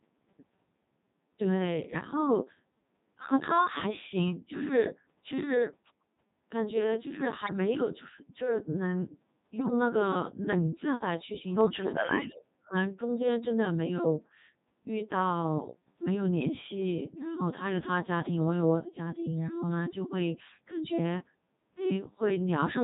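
Throughout, the speech has passed through a Codec 2 vocoder. Only pitch, voicing, energy and a coarse spectral envelope survive the channel, and the decoder rebuilds the voice from sine waves, so the original waveform is gone. The damage is heavy: the voice sounds buzzy, metallic and robotic, with a synthetic, harmonic character that fits Codec 2 at its highest rate of about 3.2 kbit/s.

At 7.46 to 7.53 s, bit errors on digital voice radio corrupt the vocoder's frame parameters. The 70 ms length points to about three frames, and the error rate sounds high, roughly one bit in ten. Wrong pitch, level and spectral values are synthesised as written, so the voice briefly jumps in pitch and tone colour, giving a short garbled bleep. At 9.56 to 9.70 s, lighter errors of a few percent spread over about five frames produce a longer but milder warble, with the pitch and timbre wobbling unnaturally.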